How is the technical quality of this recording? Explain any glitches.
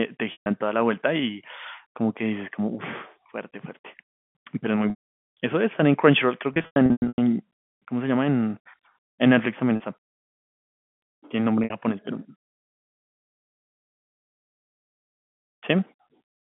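The speech has five dropouts where packets went missing on the network and the receiver covered the holes with packet loss concealment by pitch repetition. The telephone-band G.711 coding, limited to roughly 150 Hz to 3.4 kHz, carries the audio throughout.

At 0.32–0.46 s (about 140 ms lost), 9.76–9.80 s (40 ms) and 11.64–11.70 s (60 ms), the receiver looped the last pitch period, so the sound briefly holds on a slightly buzzy, frozen tone. At 4.90–5.15 s, 420 ms went missing in one block, longer than the repetition can sustain, so the buzz fades to silence before the speech cross-fades back in. Across 6.54–7.18 s, 420 ms of losses are scattered over 640 ms, the longest run being 100 ms, which produces a stuttering patch of repeated, buzzy fragments. The losses arrive in 20 ms steps, which fits 20 ms packets.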